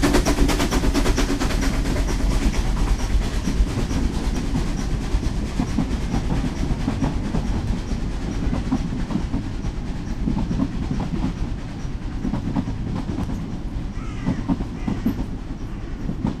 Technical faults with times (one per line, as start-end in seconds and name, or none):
1.47 dropped buffer (overrun)
4.37 dropped buffer (overrun)
7.67 dropped buffer (overrun)
13.24 dropped buffer (overrun)
14.95 dropped buffer (overrun)